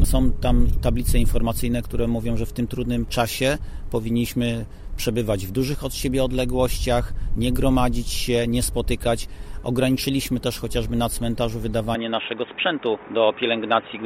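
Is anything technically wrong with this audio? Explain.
Yes. From 11.95 s to the end at 14.05 s, the input switched to a poorer device. The likely cause is the system moving the recording to a different microphone or a headset's call profile. That device passes a narrower band, with nothing above 3.8 kHz. The sound turns dull and boxy at once, with no gap at the switch. The level stays about the same. A faint new noise floor appears, far below the signal.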